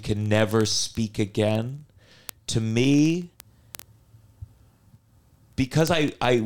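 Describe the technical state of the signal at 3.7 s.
At 3.7 s the speech is in the middle of a run of word clock ticks that starts at 0.12 s and continues to the end. The receiving device runs on its own clock, roughly 0.1 percent off the sender's, so a single sample is dropped or repeated about every 20 ms. The result is a steady train of sharp ticks of uneven strength. Their fixed rhythm sets them apart from random crackle or from packet-loss dropouts.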